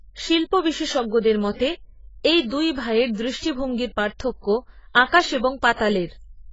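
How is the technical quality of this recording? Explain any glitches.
The speech sounds squashed and dull all the way through. That points to AAC compression, likely a low-bitrate AAC-LC encode, something around 16 kbps. To fit that budget, the coder throws away everything above 7.6 kHz and coarsely quantises what's left, so sibilants lose their edge and sustained sounds pick up a gappy, warbling smear.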